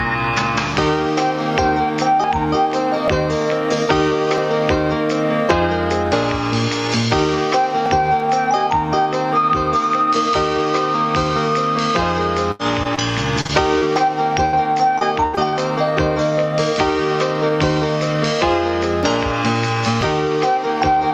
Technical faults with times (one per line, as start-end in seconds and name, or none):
2.24 dropped buffer (overrun)
3.08 dropped buffer (overrun)
4.38 dropped buffer (overrun)
7.86 dropped buffer (overrun)
12.51-12.61 burst of packet loss
12.83-12.99 short concealed packet loss
13.41-13.51 short concealed packet loss
13.79-13.83 short concealed packet loss
13.96 dropped buffer (overrun)
14.45-14.55 burst of packet loss
14.99-15.55 repeated packet loss (robotic sound)
20.01 dropped buffer (overrun)